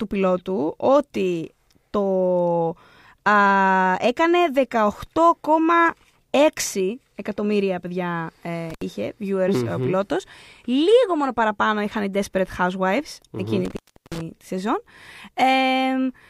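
At 8.70 s and again from 13.65 to 14.21 s, an intermittent contact briefly opens the line (about 69 ms, then 373 ms). Crackly edges and faint hiss, not clean digital silence, mark it as a loose connection.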